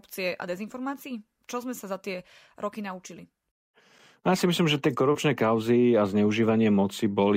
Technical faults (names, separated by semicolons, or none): none